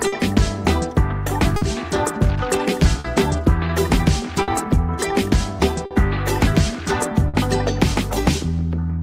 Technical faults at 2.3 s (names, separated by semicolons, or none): clock drift between sender and receiver